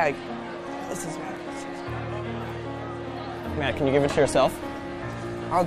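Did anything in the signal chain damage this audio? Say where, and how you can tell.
No, no signal-chain damage heard.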